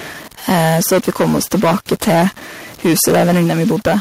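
Right through the clip there's a gritty distortion, and even the gaps fill with a hiss. That sounds like a stuck bit, likely one data bit held at a fixed value by a faulty line or converter. From 0.48 to 2.28 s the peaks are driven about 14 dB past the converter's limit, with roughly a tenth of the samples flattened. That's microphone overload, which puts a crackly edge on the loudest bits, and the likely cause is input gain set too high. At 0.52 s everything drops about 2 dB in one step, as the microphone volume is stepped down, likely the call software reacting to that clipping. The overload comes back from 2.84 to 3.97 s at about 11 dB over, with closer to a sixth of the samples clipped, and the level steps down about another 2 dB at 3.71 s.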